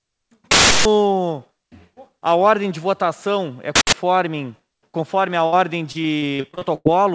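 A harsh, very loud blast of digital noise cuts in from 0.51 to 0.85 s, and a shorter one from 3.76 to 3.93 s. Both are uninitialised buffer faults: a block went out for playback before any audio had been written into it, so stale memory contents were played as samples. The lengths, about 341 ms and 171 ms, fit blocks of 16384 and 8192 samples.

At 5.46 s the sound stops moving and holds as a sustained, fading smear until 5.54 s, then resumes a little further on. This is a burst of packet loss: the receiver stretched the last audio across roughly 60 ms of missing material and faded it, so that stretch of the original is simply gone.

From 5.92 to 6.87 s the audio turns choppy and mechanical, with the robotic sound of repeated packet loss. Nine separate holes, the longest about 101 ms, were each patched by extending what came before, and the next gap arrives before the sound can settle. Around a third of this span, roughly 290 ms, is concealment rather than real audio. 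Across the whole clip the call path passes nothing above 8 kHz, consistent with G.722 at 64 kbps.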